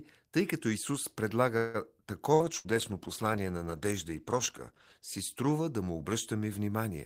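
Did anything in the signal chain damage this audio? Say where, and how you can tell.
Yes, three kinds of damage, all on the call path.

First, a call audio freeze from 1.57 to 1.77 s. The sound stalls and the last bit gets stretched into a fading buzz for roughly 166 ms. Then it picks up exactly where it left off, with nothing skipped, so everything after it runs about 166 ms later. That's likely a network stall where packets got held up and the jitter buffer ran dry, so the receiver padded the wait.

Then two bursts of packet loss, at 2.34 to 2.43 s and again at 2.58 to 2.67 s. Each time about 60 ms of audio is simply gone. The receiver covers the hole with a held, decaying continuation of the previous sound, then jumps ahead. Unlike the freeze, the timing doesn't slip; you hear a short smeared patch and a bit of the speech missing. That's network loss, concealed by the decoder.

Overlapping those, a call bitrate drop from 2.41 to 5.76 s. 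The encoder went from 32 to 14 kbps and sat at the bottom for about 2.5 s. You can hear the speech go rougher and duller, with the top end thinned out, until it climbs back near 5.8 s. The bandwidth estimate collapsed, and Opus was told to squeeze harder.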